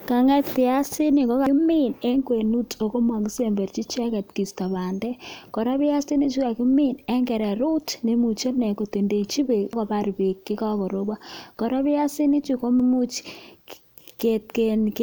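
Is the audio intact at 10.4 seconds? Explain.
Yes, at 10.4 seconds the speech plays through intact, with no dropout, click, distortion or other fault at that moment.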